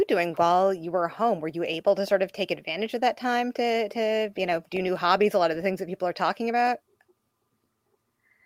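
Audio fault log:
No fault found in this speech clip.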